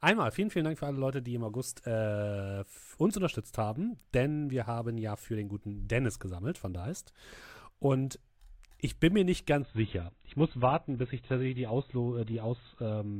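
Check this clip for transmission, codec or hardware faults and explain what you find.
One fault is present. From 9.61 s, just after "ich bin mir nicht", to the end, an adaptive stream at a lower bitrate plays, fitting AAC near 16 kbit/s. Speech turns dull and smeared. The spectrogram shows an abrupt ceiling at 4.1 kHz, and the waveform shows no gap.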